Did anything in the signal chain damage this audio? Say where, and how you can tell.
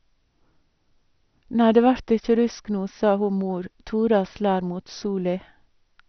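Yes, at the codec stage. Throughout the speech nothing survives above 6.2 kHz, and what remains sounds dull and granular, with upper bands flickering in and out. This is likely heavy MP2 compression, which fits a rate near 48 kbps.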